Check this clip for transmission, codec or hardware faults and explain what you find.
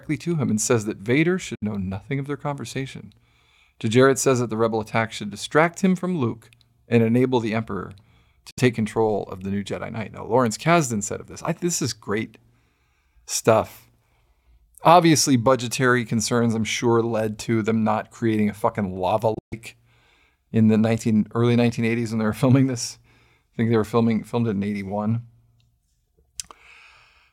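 Three short gaps in the speech sound like Bluetooth dropout. The first, at 1.55–1.63 s, cuts out 64 ms just before "know nothing of their". The second, at 8.51–8.59 s, is another 64 ms hole before "control of the new". At 19.34–19.54 s, right after "creating a fucking lava", about 149 ms goes missing in broken pieces, the longest lasting 128 ms. The likely cause is audio packets reaching the headphones too late and being discarded. Each hole is silence with abrupt edges or a fade of a few milliseconds, and the speech resumes further along, as though it had kept playing.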